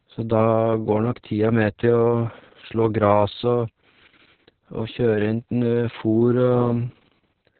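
Speech that sounds muffled, hoarse and faintly robotic, with nothing above about 4.4 kHz, is typical of heavy Opus voice compression, narrowband SILK at what sounds like roughly 6 kbps. From 0.18 s to 7.53 s, faint regular ticks recur about ten times per second. These clock slip clicks most likely come from two unsynchronised clocks drifting a couple of hundred parts per million apart, so a single sample slips each time.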